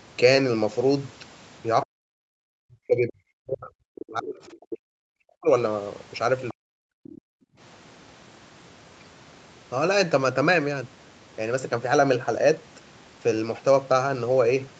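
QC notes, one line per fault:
1.84–5.5 s and 6.53–6.83 s, speech suppressed in double talk: the talker's speech sinks far down, by something like 40 dB at its worst, for about three seconds in the first stretch and a few tenths of a second in the second. This is likely an echo canceller that, with both sides speaking at once, could not tell the near talker from loudspeaker echo and pulled the whole microphone signal down. Unlike gating, the loss is of the foreground speech itself, not the room.
6.48–6.54 s and 7.04–7.21 s, other side's voice leaking through: brief scraps of a second, much quieter voice, roughly 25 dB under the talker, break through. The first lasts only about 60 ms, right where the second suppression begins, and the second lasts under a fifth of a second. The likely cause is residual loudspeaker echo that the canceller failed to subtract. What separates it from crosstalk or a noisy background is that it comes through as a separate voice rather than a general room murmur.
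7.21–7.59 s, background gated by the echo canceller: immediately after the second leak, the room tone drops away by about 40 dB for roughly 0.4 s and then returns. The canceller clamped the microphone hard while the far side was playing and released it shortly afterward. What marks it apart from double-talk suppression is that what disappears is the ambience rather than the speech, leaving a brief dead hole that a listener hears as the room switching off and on. The 8 kHz top end belongs to the call's Opus path and its filtering, not to this event.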